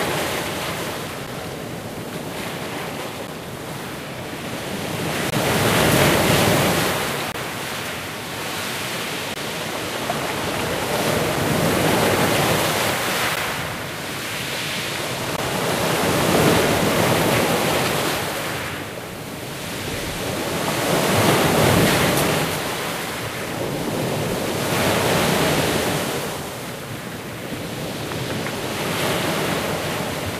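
Gap between stream segments at 1.27, 3.27, 5.30–5.32, 7.32–7.34, 9.34–9.36, 13.36 and 15.37 s cuts hard-edged silent holes of about 10 to 24 ms into this recording of everyday sounds. They repeat roughly every 2 s, where segment timestamps fail to meet and the player fills the gap with silence.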